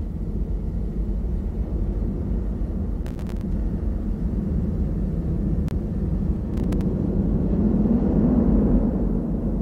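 The whole clip has a watery, swirly quality with the top end cut off, which is the sound of MP3 compression, likely at a low rate around 64 kbps. With too few bits, the encoder drops the treble and lets weak frequency lines flicker in and out between frames.

From 3.04 to 3.41 s there's processor overload crackle: a gritty tearing where the processor kept missing its deadlines and each late buffer came out as a short hole of silence. The spacing fits a buffer of around 5 ms, with about 20 missed.

From 3.52 to 6.36 s you get a doubled audio track. A second full-band copy trails about a second behind at roughly 5 dB down, likely from a second capture path or a misaligned edit. It has no room colour, and it cuts in and out abruptly.

Inside that stretch, from 5.68 to 5.75 s, a corrupt frame gets decoded. A couple of damaged frames were played anyway, so energy lands at the wrong frequencies and you hear a short glitch.

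The crackle comes back from 6.54 to 6.82 s with the same silent gaps, this time only a handful of missed buffers, so it's a shorter burst.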